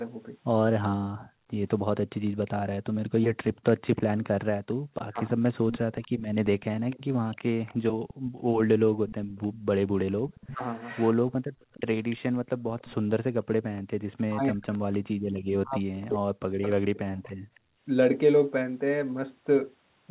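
From 1.12 to 17.82 s, the background is gated by the echo canceller. Each time the far side plays through the loudspeaker, the canceller pulls the microphone down hard, by as much as about 40 dB. The room sound dips or vanishes, then comes back when the canceller releases. These gaps add up to around three seconds.

From 1.83 to 5.38 s, the talker's speech is briefly suppressed in double talk. The sound dips, thins or breaks into pieces for a fraction of a second in all, with drops of roughly 35 dB. The likely cause is both sides talking at once. The canceller cannot tell the near voice from the loudspeaker echo, so it turns both down.

From 2.27 to 17.59 s, there is an echo leak. A faint copy of the speech comes back about 302 ms late, roughly 20 dB below the main voice. It is likely that the far end's loudspeaker sound reached its microphone and was not fully cancelled, so the leftover was sent back.

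Double-talk suppression returns at 10.46 to 10.62 s, as a short dip of roughly 30 dB. It comes back again from 14.29 to 17.34 s, and this stretch is much heavier. Here the speech is turned down for about two seconds in all, with drops near 40 dB. Throughout, the audio stops at 4 kHz, which fits narrowband G.711 call coding.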